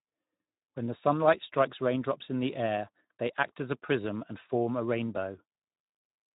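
Throughout, the speech sounds hoarse and noisy, with nothing above 3.8 kHz: Speex codec damage, which fits a bitrate around 11 kbps starving the excitation.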